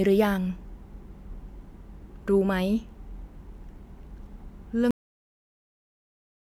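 At 4.91 s the speech ends in a cut-off end: the final buffers never reached the output, so the sound stops abruptly, and waveform and spectrogram drop straight to flat digital silence without decay.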